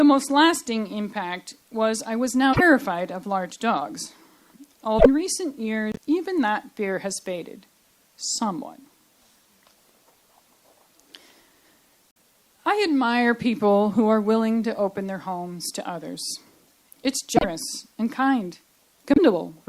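There are six short glitches where the sound jumps ahead and the next fraction of a second comes out as a chirp, a noise burst or a short hole: 2.52–2.61, 4.98–5.06, 5.92–5.99, 12.11–12.19, 17.36–17.44 and 19.14–19.19 s. Each lasts two or three 26 ms MP3 frames, so it's likely a broken MP3 bit reservoir: frames were dropped, and the frames right after each gap pulled their borrowed data from the wrong bytes.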